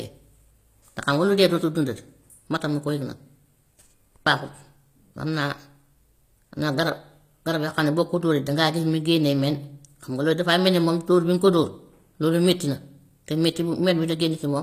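Throughout, the s sounds are gritty and metallic while the treble stays bright up to about 14.9 kHz. That points to likely HE-AAC compression at around 24 kbps, with the highs rebuilt rather than simply cut off.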